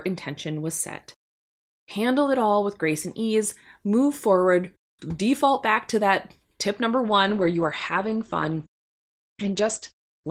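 Speech that, from 7.09 s to the end at 10.31 s, right after "to that tip number", suffers a call bitrate drop: the top end narrows from about 20 kHz to 8 kHz and the sound turns coarse and watery, as if the encoder fell from about 32 to 11 kbps. Unlike packet loss, nothing drops out; the signal stays continuous but degraded.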